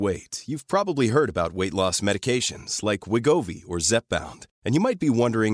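No technical faults can be heard at any point in the recording.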